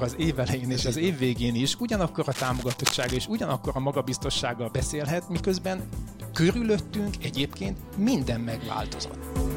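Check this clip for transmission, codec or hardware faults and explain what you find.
One fault is present: cable scratch noise from 2.31 to 3.17 s. Dense, uneven crackling and rustling sits over the audio, only slightly below the signal level. The likely cause is a worn cable, connector or control being moved, so its contact resistance fluctuates rapidly and injects bursts of noise.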